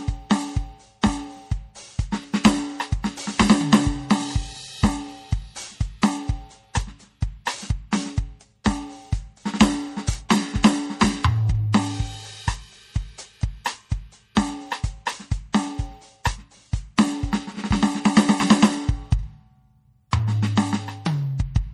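Throughout the music, the top end stops dead at 14.9 kHz and the damage is plainly audible. This is most likely MP3 compression at a low bitrate, with the sound pointing to something around 48 kbps. Starved of bits, the encoder cuts everything above that fixed frequency and drops quieter spectral lines, which flicker in and out between frames. The result is a watery, swirling texture, with metallic chirps on bright material and softened attacks.

At 10.29 s and again at 14.35 s, a sharp attack is preceded by a brief hiss lasting about 15 ms. This is pre-echo. The codec spreads its quantisation noise evenly across each transform block, so when a loud onset lands late in a block, noise sized for that loud moment also fills the quiet stretch just before it. Each attack therefore arrives with a smear leading into it and sounds less crisp than it should.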